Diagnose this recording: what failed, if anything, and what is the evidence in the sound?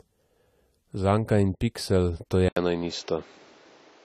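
The whole clip has a plainly audible codec problem. The speech is dull and a bit smeared, with a fizzy, watery edge on sibilants, and there's nothing at all above 13.9 kHz. That looks like AAC compression, likely AAC-LC starved of bits, at a rate that fits something around 32 kbps. The encoder pulls in the cut-off, coarsely quantises what's left, and leaves gaps or substitutes noise in the bands it can't afford.

Then at 2.49 s there's an 80 ms dropout, and from there to the end the band stops at 7.6 kHz, so it turns boxy and narrower. A faint new background noise sits well under the speech, while the overall loudness barely moves. That's the signature of the input switched to a poorer device, most likely at the driver or device-routing stage, with a lower-grade mic or a headset call profile taking over mid-recording.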